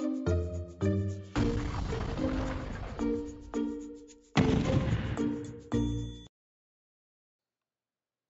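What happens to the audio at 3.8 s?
Nothing goes wrong at 3.8 s: the audio there is intact, with only the ordinary call microphone processing, which trims the deepest bass and carries nothing above 8 kHz.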